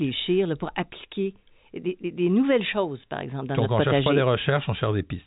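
At 4.04 to 4.06 s, just after "ne cherche", there is a brief packet loss with pitch repetition: about 20 ms of the speech, one packet's worth, went missing, and the receiver filled the hole by looping the last pitch period. It sounds like a tiny held, slightly buzzy sustain. On a spectrogram the harmonics run flat and unchanging across that sliver; the waveform shows identical repeated cycles, easy to spot against the 4 kHz ceiling of the G.711 telephone band.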